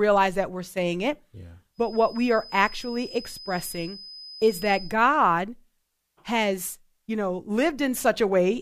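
From 1.72 s to 4.97 s a thin, steady whistle at 5 kHz sits behind the speech, swelling and fading slowly in level and staying roughly 20 dB below it. This is a feedback whistle: the likely cause is a loudspeaker-to-microphone loop held just at the edge of feedback, so that single high frequency keeps circulating and sustaining itself without building into a runaway howl.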